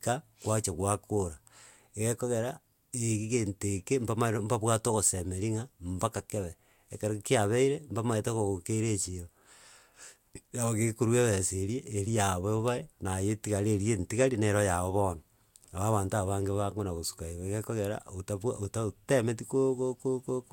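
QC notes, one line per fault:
No technical faults were found in the speech signal at any point.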